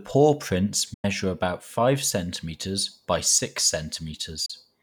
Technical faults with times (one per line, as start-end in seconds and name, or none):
0.93-1.05 digital broadcast dropout
4.45-4.50 digital broadcast dropout